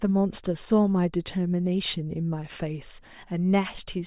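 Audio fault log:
No technical fault can be heard anywhere in this speech recording. Nothing in it calls for a repair.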